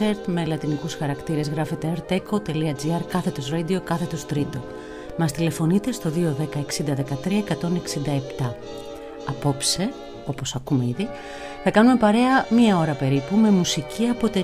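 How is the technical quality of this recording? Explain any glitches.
The recording has two glitches, both DC steps, at 5.10 s and 9.76 s. At each, the waveform's zero line jumps by about -25 dBFS and then drains away through a 20 Hz high-pass. Each step is heard as a low thump or click, and the sound itself continues without a gap, which sets it apart from a dropout.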